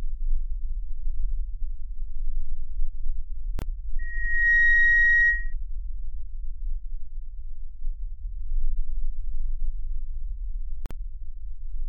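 At 3.59 to 3.62 s and 10.86 to 10.91 s, gaps at joins of encoded pieces cut silences of 28 and 49 ms. Untrimmed encoder delay and padding cause them. The sound then resumes.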